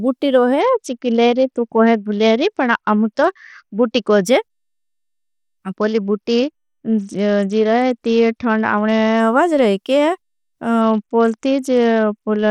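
A Bluetooth SBC bit pool drop struck at 0.61–4.24 s (after "बुटी रोहे"), 5.72–9.20 s (before "आवाज रोहे") and 10.81 s to the end. The encoder starved its upper sub-bands, consistent with a pool near 8 and roughly 72 kbps, so the speech turns dull and gritty.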